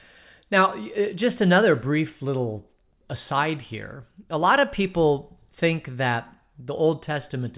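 Nothing in the recording stood out as a technical problem on listening.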